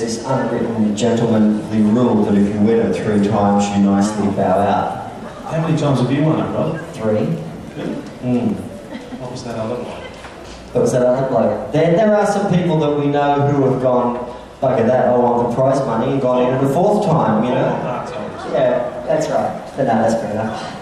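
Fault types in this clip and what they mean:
Drift correction step: software keeping two clocks in line likely stepped the playback rate to refill or drain its buffer, shifting speed and pitch together before snapping back. From 2.29 to 4.05 s the sound runs 6.29% slow and drops 112 cents, just over a semitone. It then runs 6.29% fast and sits 106 cents sharp from 6.82 to 7.90 s, 11.15 to 12.01 s, and 19.07 s to the end.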